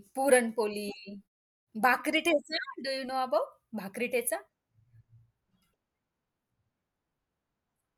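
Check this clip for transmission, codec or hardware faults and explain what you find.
Nothing stood out on listening to this speech recording, and the way the background drops away in the pauses and comes back in time for each next phrase is simply the muted pauses working as intended.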